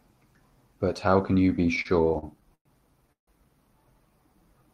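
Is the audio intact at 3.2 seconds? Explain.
No. From 3.12 to 3.29 s there is a call audio freeze: the last sound stretches into a brief fading buzz, then about 130 ms of silence, likely from delayed packets draining the jitter buffer. Unlike a dropout, nothing is lost; playback resumes where it stopped, simply later.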